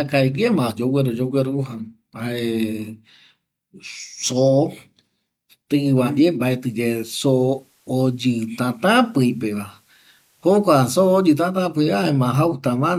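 At 6.35 s, just after "tƚva ndie", the receiver drops its digital signal and crossfades over about 455 ms to the FM analogue broadcast of the same station: digital radio blending to analogue. On the FM side, the level falls by about 1 dB, and a faint hiss sits roughly 40 dB down. The blend back to digital comes at 11.75 s.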